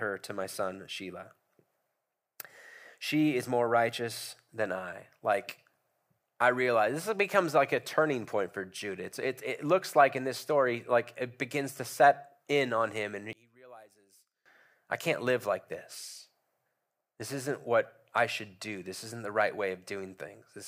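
From 13.33 to 14.46 s, after "in on him and", the speech drops by about 26 dB and returns before "I can't live like". The likely cause is one channel inverted: opposite polarities cancel their shared content in the mono sum, leaving only the small difference between channels.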